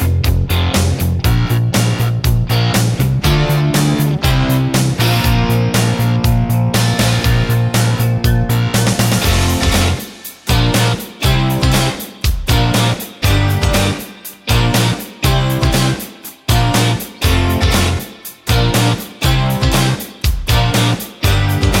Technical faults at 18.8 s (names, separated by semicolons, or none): none